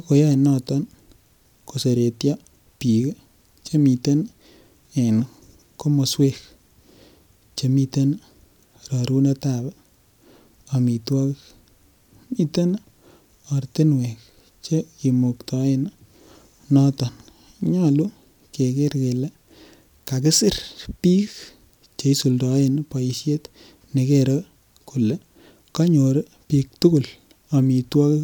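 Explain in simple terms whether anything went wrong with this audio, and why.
Nothing went wrong here; I listened closely to the whole recording and didn't catch a single glitch, dropout or odd noise anywhere in the speech.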